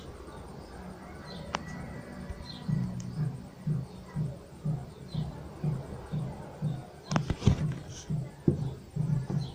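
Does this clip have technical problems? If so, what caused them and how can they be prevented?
No, the signal holds steady throughout with nothing technically wrong to address.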